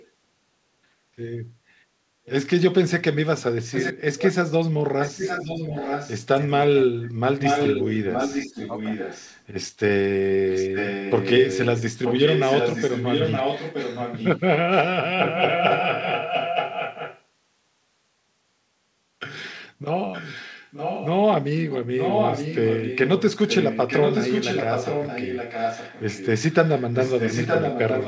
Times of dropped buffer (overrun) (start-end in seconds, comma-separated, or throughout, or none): none